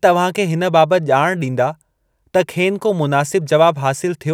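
No technical faults can be heard anywhere in this clip.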